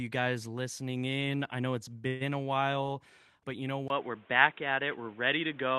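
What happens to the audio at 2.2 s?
Between 2.07 and 2.30 s the speech stalls in a call audio freeze, likely from packets held up in transit that left the jitter buffer empty. The receiver carries the last sound forward as a fading buzz or hiss for about 131 ms. Nothing is lost: the speech resumes where it stopped, now running 131 ms later. On a spectrogram this shows as smeared, repeating bands that fade out, under the 12 kHz ceiling of the Opus stream. In the waveform it is a decaying, periodic stretch.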